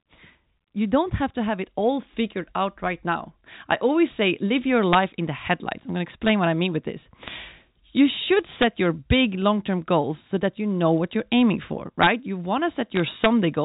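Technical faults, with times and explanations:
4.08 s, 7.25–7.28 s (just after "I mean with this") and 12.96–13.00 s: bit errors on a digital phone line. Brief bursts of sharp ticks and crackle sit on top of the speech, which is unchanged underneath. A small number of flipped bits in the 8-bit telephone samples throw single samples far off their true value, and hits on the sign or top bits give the loudest ticks.
4.93–4.95 s, 6.27–6.29 s (just before "what I mean with"), 8.62–8.64 s, 12.02–12.07 s (just after "what you're aiming for") and 13.24–13.26 s: integer overflow. Violent, brittle cracks land on loud peaks, much harsher than clipping. Peaks pushed only about 1 to 2 dB past the integer limit wrapped round to the opposite sign instead of being held at the limit, so each overshooting sample swings across the full range.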